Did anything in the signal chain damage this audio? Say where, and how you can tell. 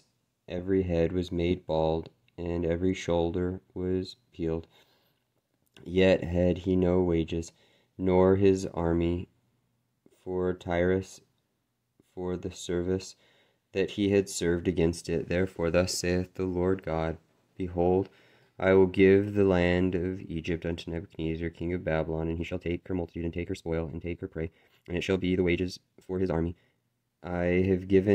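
Yes. From 22.31 s to 26.87 s there is a time-stretched section. The pace jumps abruptly to about 1.71 times normal while the pitch stays put, and the passage sounds rushed rather than raised in pitch. This is likely a software processing stage that squeezed the segment to fit a set length. It kept the pitch by dropping short slices of the waveform and splicing the remaining pieces together, which makes the passage sound rushed.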